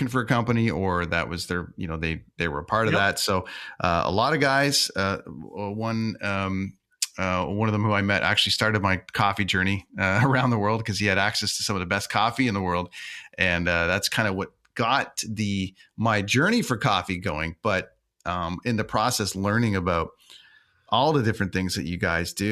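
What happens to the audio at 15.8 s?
At 15.79 s, compressed frames are skipped: about two 23.2 ms frames never reach the output, so roughly 50 ms of speech vanishes between "of what got the" and "my journey for coffee". The speech jumps ahead at the join.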